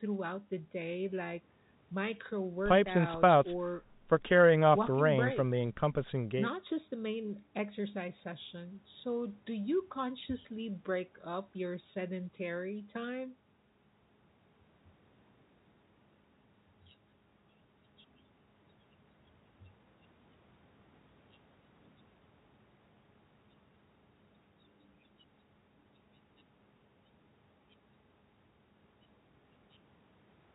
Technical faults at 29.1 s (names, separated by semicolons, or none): none